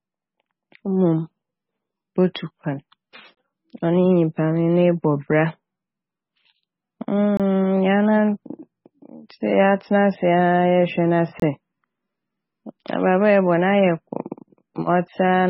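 The whole speech clip has a dull, watery quality: there's nothing above 5.6 kHz, so the top end is simply gone, and the quieter detail in the sound swirls and flickers from moment to moment, with sibilants turning metallic. That's most likely heavy MP3 compression, consistent with a very low bitrate somewhere around 16 kbps, where the encoder runs out of bits, chops the treble and lets weak frequency lines drop in and out.

At 2.34 s there's a bit of pre-echo. A sharp attack lands late in a coding block, and the quantisation noise meant to cover the loud part gets spread across the whole block, so about 11 ms of hiss creeps in just ahead of the onset. The attack itself comes across softened and smeared rather than crisp.

Then there are three gaps between chunks, at 3.35 s, 7.37 s and 11.40 s. Each is a hole of about 25 ms, and they turn up every 4 s, which points to the audio being delivered in 4-second chunks with silence left at each join, perhaps from codec padding or a player starting each chunk a touch late. 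Nothing seems to be lost. The flow just stutters at each boundary.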